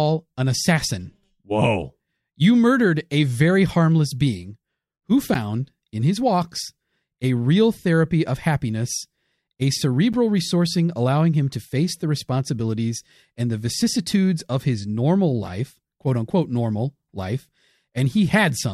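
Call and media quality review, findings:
Block of digital silence, speech, at 5.34 s after "very harmless being who" and at 10.13 s after "therapy of happiness a". Heard as a tick or dip each time. Each block is a 10 ms hard drop to silence, likely an output buffer not filled in time by the audio render path.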